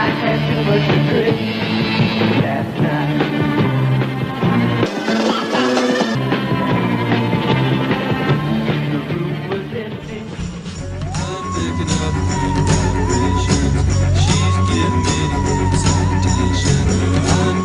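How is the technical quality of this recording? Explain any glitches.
The recording has two glitches.

At 1.58 to 1.62 s, compressed frames are skipped. Damaged or missing frames never reach the output, so the audio jumps ahead by about a tenth of a second.

From 4.86 to 6.15 s, a section plays at the wrong speed, 1.7 times too fast. Pitch rises by about ten semitones, so the sound turns high and hurried. The likely cause is playback or editing against a mismatched clock.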